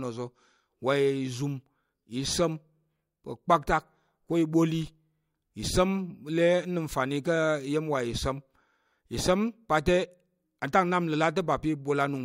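Speech recording, no technical faults detected anywhere in the file.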